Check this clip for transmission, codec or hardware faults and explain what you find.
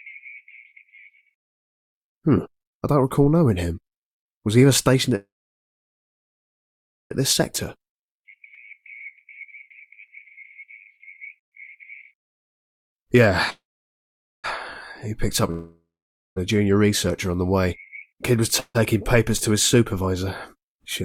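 The clip has four kinds of transmission fault, all typical of a packet-switched call: three freezes, two speed-up passages, one skip ahead and one long network dropout.

Call audio freeze, at 5.15–7.12 s, 13.50–14.46 s and 18.60–18.77 s: the sound smears into a fading buzz, then goes silent for about 1.84 s, 0.84 s and 0.05 s respectively before resuming where it stopped. The likely cause is delayed packets draining the jitter buffer, which adds delay but loses nothing.

Jitter buffer speed-up, at 7.53–13.32 s and 19.74–21.03 s: the audio sounds hurried at unchanged pitch, running at 108% and then 112%. After a backlog, the receiver trimmed tiny pitch-period slices to reduce delay, roughly half a second in total the first time and about 0.15 s the second time.

Skip ahead, at 8.54–8.57 s: playback jumps forward with almost no gap, and both sides are butted together. Roughly half a second of audio is gone, dropped while later packets were already queued, which cuts back the delay built up earlier.

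Long network dropout, at 15.51–16.38 s: a brief decaying buzz gives way to about 0.52 s of silence, and the sound returns further on with about 0.86 s missing. Here the packets likely never arrived, so the receiver skipped past the lost stretch instead of waiting for it.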